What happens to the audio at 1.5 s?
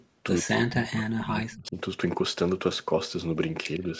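At 1.5 s the speech is inside a stretch of speech suppressed in double talk, running from 0.43 to 1.77 s. The level falls by as much as about 40 dB, so the talker dips sharply instead of coming through steadily. The likely cause is an echo canceller facing simultaneous talk from both ends: unable to separate the near talker from loudspeaker echo, it attenuated everything it picked up.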